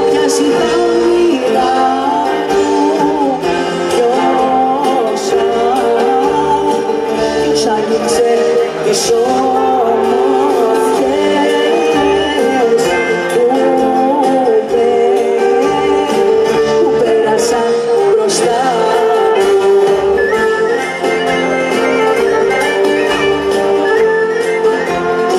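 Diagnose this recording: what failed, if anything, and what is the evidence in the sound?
Nothing failed, and the sound gives no evidence of a fault at any stage of the recording chain.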